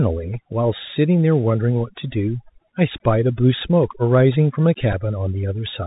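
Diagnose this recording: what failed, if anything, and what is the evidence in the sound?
Overdone noise removal runs through the whole recording, in the call-processing stage. The background drops and breaks up into twinkling specks. The suppressor was set too hard, shutting off individual frequency bands near its noise estimate and taking quiet speech detail with them.

Bluetooth CVSD headset codec damage is plainly audible from start to finish, at the codec stage. Nothing passes above 4 kHz, a granular hiss sits under the speech, and s sounds come out scratchy. CVSD codes one up-or-down bit per sample at 64 kHz with an adaptive step, and loud high sounds outrun that step.

A Bluetooth headset packet repeat at 4.92 s, on the wireless link, is heard as a brief buzz near 267 Hz. About 7.5 ms of audio is missing, which fits two lost 3.75 ms packets. The headset chip decoded the previous packet's bits again instead of leaving a gap.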